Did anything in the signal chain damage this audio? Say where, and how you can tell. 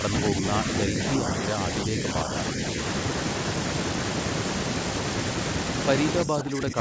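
Yes. The speech dips in patches, by a few decibels from 0.01 to 0.44 s and 0.86 to 2.61 s, then by about 15 dB from 6.24 to 6.78 s. This is likely speech suppressed in double talk: the call's echo canceller confused the talker with echo and attenuated both.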